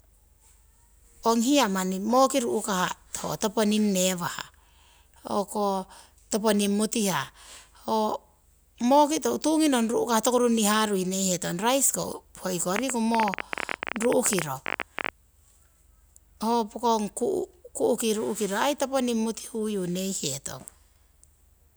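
From 12.76 to 15.10 s, a train of clicks ticks over the speech. About 17 per second arrive unevenly, some 15 dB louder, likely from electrical interference.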